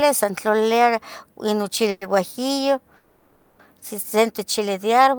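Packets were likely held up in transit, draining the jitter buffer and causing a call audio freeze at 1.90–2.02 s and 2.96–3.60 s. The last sound stretches into a fading buzz for 110 ms, then 630 ms, before the speech resumes where it stopped, running later each time.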